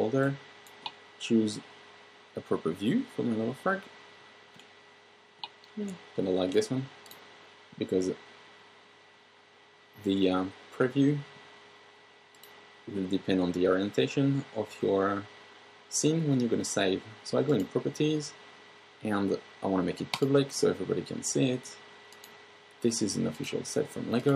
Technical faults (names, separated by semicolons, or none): none